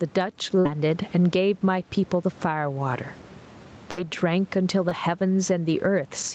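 Gain pumping runs through the whole clip. The gain swings by roughly 15 dB, so the level breathes along with the speech and loud and quiet passages sit squashed together. The likely cause is input gain set far too high for the microphone, with a fast limiter or compressor clamping it down on every peak and then releasing it in the gaps.

A burst of packet loss hits from 0.59 to 0.67 s, and another from 3.91 to 3.99 s. Each time, a stretch of the stream arrived too late or not at all. The receiver bridged the hole by extending the last sound it had, for about 53 ms the first time and about 62 ms the second, fading it out as it went. That produces a held buzz or a dying hiss. Playback then picks up further along, with roughly 60 ms of the speech simply gone.

Short concealed packet loss follows at 4.89 to 4.93 s. A sliver of about 20 ms failed to reach the decoder in time, and the gap was patched over about 18 ms by continuing the preceding sound, either from its pitch or as shaped noise, before blending back into the real signal. 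It comes across as a brief smear or wobble, and a quick consonant there could drop out.

A DC step lands at 5.80 s. The waveform's zero line jumps abruptly, the way it does when a converter recalibrates or an offset input is switched in. This is heard as a low thump or click, while the speech carries straight on. The offset then drains away as the 20 Hz high-pass filter pulls the signal back toward centre.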